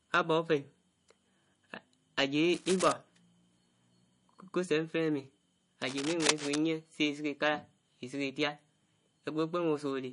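From the start, the speech sounds watery and dull, with nothing above 10.6 kHz, likely MP3 compression at a low bitrate, around 40 kbps. Its swirl follows the signal, unlike steady hiss. From 2.54 to 2.92 s and again from 5.82 to 6.58 s, cable scratch noise adds uneven rustling bursts, likely from a contact whose resistance jumps as it moves. The second burst is louder, only about 5 dB below the speech. These irregular bursts differ from regular, evenly spaced clicks.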